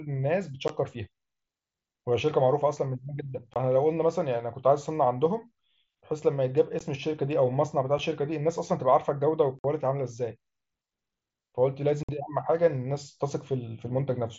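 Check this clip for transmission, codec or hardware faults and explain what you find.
There's one problem here: unconcealed Bluetooth headset packet loss, at 0.68 s, 3.54–3.56 s, 6.79 s, 7.98 s, 9.59–9.64 s and 12.03–12.09 s. Small blocks of speech went missing between headset and phone, and nothing was patched in. You hear hard-edged dropouts, with the two 52.5 ms holes the longest. Over the mSBC link the speech stays wideband.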